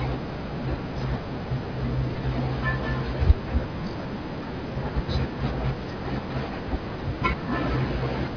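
No technical faults occur at any point in the speech, so there is nothing to describe in time order.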